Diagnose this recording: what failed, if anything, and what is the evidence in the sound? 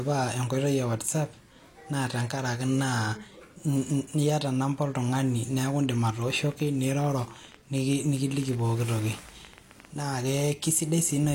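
A train of clicks runs from 5.69 to 10.01 s, starting just after "namba oltung'ani": some fifty similar pops at an uneven pace, about 11.8 per second, roughly as loud as the speech. The likely stage is the analogue wiring, picking up interference from nearby equipment.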